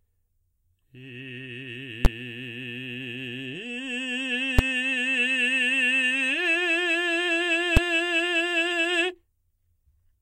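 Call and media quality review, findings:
Invalid numbers at full scale in music: sharp bangs at 2.05, 4.59 and 7.77 s, likely a DSP block emitting infinite values clamped to full scale, lengths fitting 512- and 256-sample blocks.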